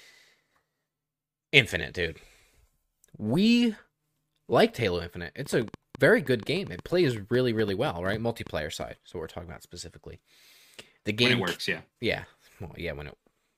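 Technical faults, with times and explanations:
5.46–8.83 s: train of clicks, about twenty similar ticks at 6.6 per second, irregularly spaced and roughly as loud as the speech, likely from interference or a faulty connection or power supply.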